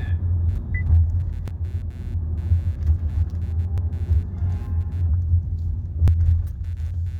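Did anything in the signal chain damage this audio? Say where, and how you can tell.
Yes. Computer activity noise runs through the whole clip as a faint buzz pulsing at around 150 Hz, roughly 40 dB below the sound. It changes with the machine's activity rather than with the audio, which points to the analogue wiring: processor or graphics load disturbing the shared ground the audio circuit uses.

Audio missing between chunks appears at 1.48, 3.78 and 6.08 s. At each point about a fifth of a second drops out, and the two sides butt together with no silence between them. The even 2.3 s spacing plus that loss fits 2.5 s blocks, so the likely cause is the driver or buffer stage losing audio while closing one chunk and opening the next.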